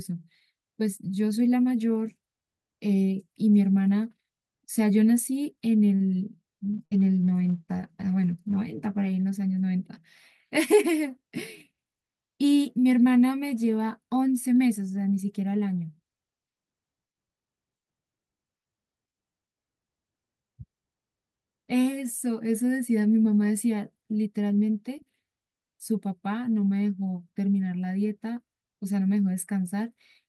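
From 5.95 to 6.03 s a short stall from a late packet holds the current sound for about 46 ms; frozen, flat harmonics show on the spectrogram, with nothing lost afterwards.

At 6.79 s a call bitrate drop takes the stream from 48 to 17 kbps until 9.91 s, bottoming out for about 1.8 s. It sounds rough and muffled, with a thinned, blotchy upper spectrum.

Within that stretch, from 6.85 to 6.94 s, a burst of packet loss is concealed with 60 ms of the last sound continued and fading, seen as a tapering waveform, then 60 ms of audio is skipped.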